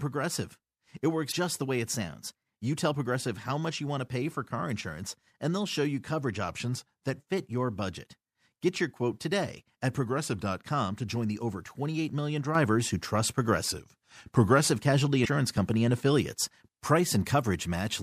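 At 1.29 to 1.33 s the speech is briefly disrupted, the sound of damaged data in a compressed stream. Some bytes in the encoded frames there were corrupt, so the decoder misread them, lost frame sync and searched for the next valid header.

From 1.95 to 2.52 s the audio runs about 6.3% fast and sits about 105 cents sharp, roughly a semitone. Speed and pitch move together, which points to a drift correction step: clock-matching software likely changed the playback rate in one jump to drain its buffer. The same step recurs in the other direction three times, about 6.3% slow and about 112 cents flat, at 6.48 to 7.19 s, 10.06 to 10.59 s and 13.64 to 14.70 s.

At 12.55 s the level rises by about 6 dB and stays there to the end of the clip. The speech and the background noise step up together at a single instant with no ramp. That is a sudden gain jump, likely a digital gain setting applied from one sample to the next. 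The last drift step at 13.64 s falls inside this louder section.

At 15.23 to 15.27 s another brief blip marks a second patch of damaged compressed data.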